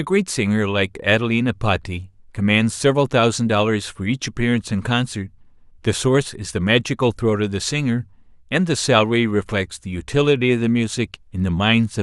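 Nothing stood out as a technical problem on listening to this speech recording.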